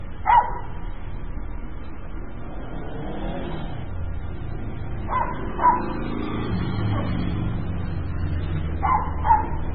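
From start to finish the audio is dull and warbly: nothing is present above 4.9 kHz, and the remaining detail swirls and flickers, with a watery, metallic edge and smeared onsets. This is likely heavy MP3 compression, consistent with a bitrate near 16 kbps. Starved of bits, the encoder dropped the top band and discarded weaker frequency lines that come and go between frames. That flickering sets it apart from a plain low-pass filter, which would dull the treble but leave the rest steady.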